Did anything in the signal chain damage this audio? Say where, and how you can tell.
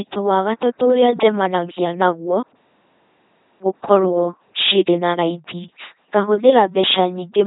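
Yes, and it starts at the codec stage. The whole clip has the buzzing, mechanical robot quality of an LPC-10 vocoder. Each moment gets forced into fully voiced buzz or fully unvoiced hiss, nothing reaches above 3.8 kHz, and the damage is heavy, which fits a 2.4 kbit/s link.

The second problem is on the playback side, a clipped start after a pause. After a 0.57 s gap, speech jumps in abruptly at 3.01 s with its opening missing, and about 0.6 s is swallowed through 3.62 s. That's the output device dozing off in the silence and waking too slowly.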